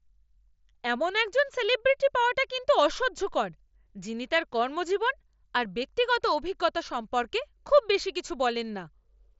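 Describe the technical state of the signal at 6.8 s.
At 6.8 s the speech is intact, with no fault, and it carries the band limit of the mSBC Bluetooth headset path, with nothing above about 7.7 kHz.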